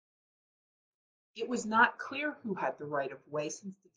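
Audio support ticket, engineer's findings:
Speech drops about 105 cents flat and runs 5.9% slow from 1.97 to 3.35 s, then snaps back. Likely a drift correction step: the clock-matching resampler slowed its rate in one jump to refill its buffer, dragging pitch and speed down together.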